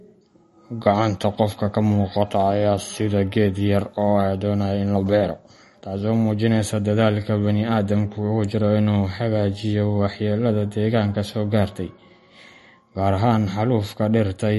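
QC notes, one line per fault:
Throughout: MP3 compression. The speech carries plainly audible codec damage: a watery, swirling texture, metallic chirps on s sounds, and smeared consonant onsets. Nothing is present above 11.6 kHz, which shows on a spectrogram as a hard, flat ceiling. Below it, weak components flicker on and off as isolated blocks from frame to frame. The likely cause is an MP3 encoder short of bits, consistent with a bitrate around 40 kbps.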